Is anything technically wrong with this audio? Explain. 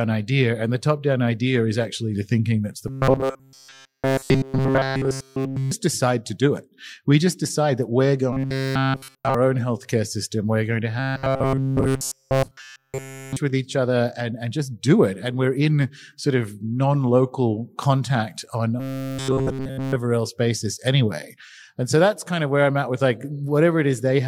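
Yes. Robotic sound from repeated short buffers appears at 2.88–5.71 s, 8.33–9.35 s (after "just decide that we're", before "own healthcare system"), 10.99–13.37 s (after "going to", before "with each other and") and 18.80–19.96 s (after "non local contact on", before "else basis anyway"). Audio likely arrived too slowly, so a fragment of about 7.5 ms was looped while nearly all new speech was skipped. This imposes a rigid 134 Hz metallic buzz that only loosely tracks the speech.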